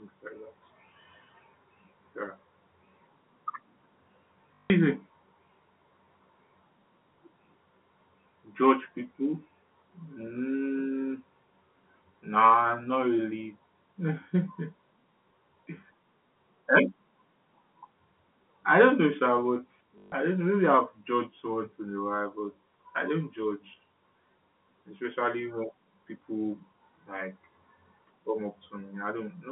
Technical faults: packet loss with last packet repeated

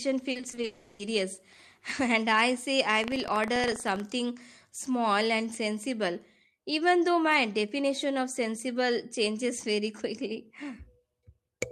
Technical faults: repeated packet loss (robotic sound); long network dropout; buffer tearing

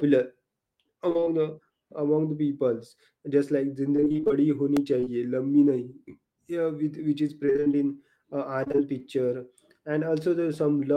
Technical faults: repeated packet loss (robotic sound); repeated buffer; short concealed packet loss

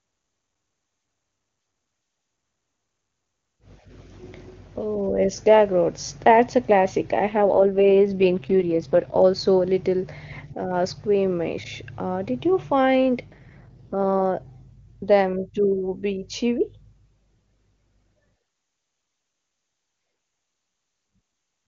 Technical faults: AMR rate drop

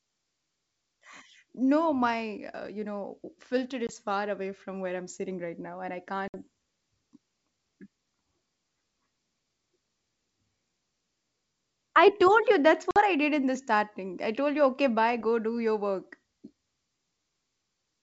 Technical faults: packet loss on an ADPCM call

